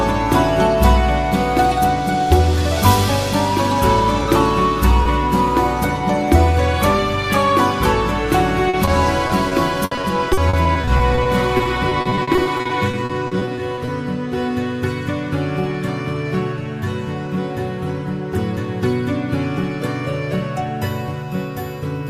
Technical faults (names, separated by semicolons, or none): short concealed packet loss; repeated packet loss (robotic sound)